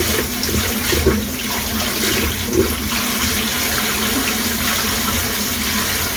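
From start to finish, these sounds carry a layered, smeared texture that points to transcoding between lossy codecs. The likely cause is an MP3 encode at around 96 kbit/s that was later re-encoded to Opus at around 48 kbit/s. The Opus pass had to spend its smaller budget reproducing the MP3's own artefacts, then added its own softening on top, so both codecs' artefacts sit together. Nothing remains above 20 kHz.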